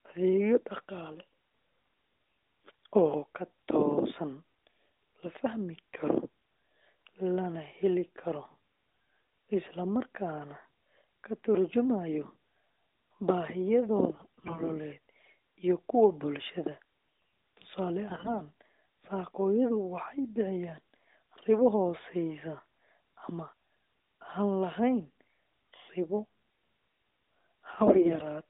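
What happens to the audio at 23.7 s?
Nothing goes wrong at 23.7 s: the speech there is intact, still carried through the narrowband AMR mobile codec with its telephone-band sound, and no fault occurs at that moment.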